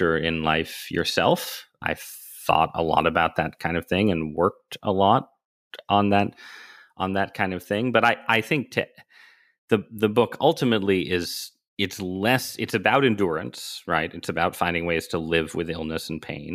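Nothing technical goes wrong anywhere in this stretch of speech, so there's nothing to flag.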